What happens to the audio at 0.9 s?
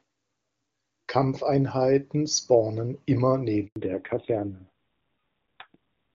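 Nothing goes wrong at 0.9 s: the speech there passes intact through the AMR wideband (HD Voice) codec path.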